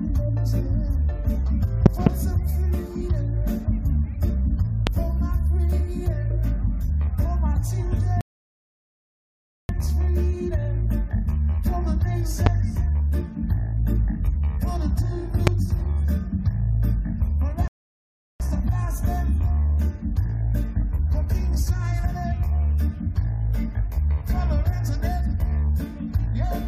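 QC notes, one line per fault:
1.86–2.09 s, 4.87–4.89 s, 12.46–12.49 s and 15.47–15.50 s, loud pop: sharp clicks roughly 20 dB above the sound, a double pop in the first and single ones after, with the audio carrying on underneath. Likely a voltage step or driver glitch that the downstream circuitry shaped into a pulse.
8.21–9.69 s and 17.68–18.40 s, rebuffering stall: the sound drops to silence, then picks up exactly where it left off, so nothing is lost but about 1.5 s and 0.7 s are added. The player ran dry of downloaded audio and waited for more.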